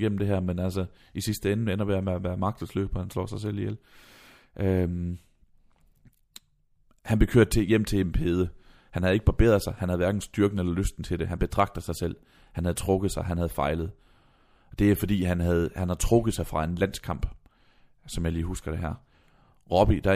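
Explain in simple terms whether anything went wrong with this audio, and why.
Nothing went wrong with this recording, as no technical faults can be heard anywhere in it. The speech comes through steadily, without dropouts, glitches or interruptions.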